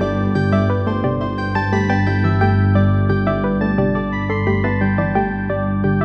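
Nothing in this one trips the ear at all: no dropouts, glitches or odd artefacts turn up anywhere along the way.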